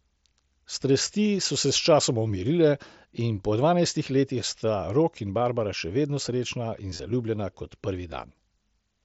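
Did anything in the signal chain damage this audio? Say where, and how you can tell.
Yes, concealed Bluetooth headset packet loss on the headset-to-phone link. There's a near-hidden blip at 2.28 s after "so se sčasoma", then a buzzy patch from 6.90 to 7.00 s before "zaljubljena kot", where the phone filled the dropped packets by looping recent waveform.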